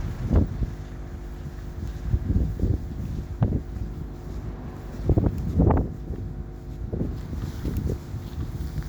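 Mains hum runs through the whole clip, from start to finish, as a steady 50 Hz drone. Power-line current has leaked into the signal path, which points to a ground loop or a transformer close to the cabling, so the supply frequency rides along underneath everything. The hum is strong, sitting not far below the wanted sound, and it stays fixed in pitch and level, giving a constant low buzz that never fades between events.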